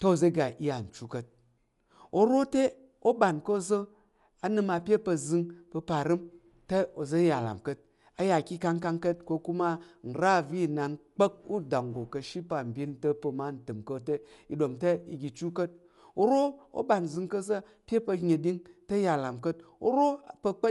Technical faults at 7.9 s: Dolby Digital compression

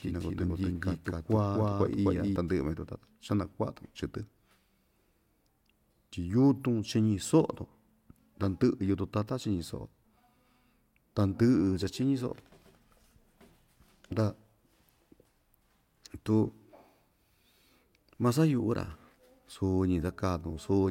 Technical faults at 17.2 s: none

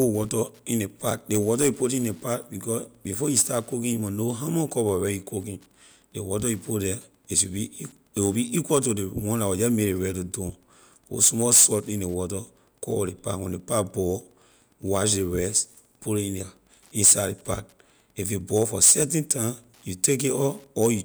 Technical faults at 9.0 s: Wi-Fi interference

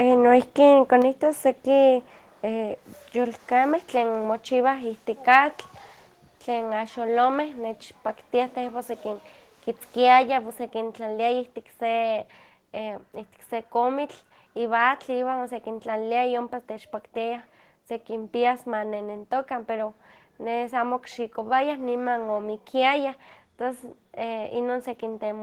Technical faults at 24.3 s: none

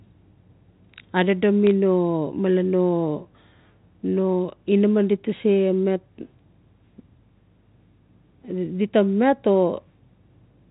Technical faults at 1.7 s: bit errors on a digital phone line

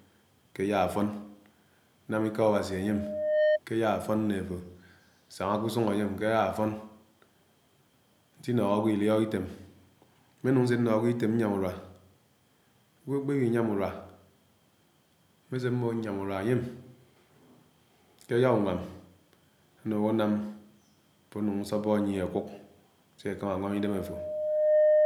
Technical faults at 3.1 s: loudspeaker feedback squeal

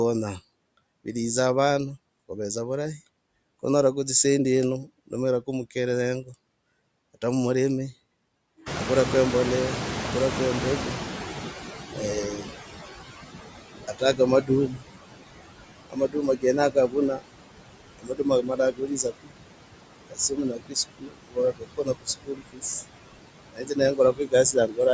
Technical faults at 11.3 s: noise suppressor artifacts; noise suppressor catching up

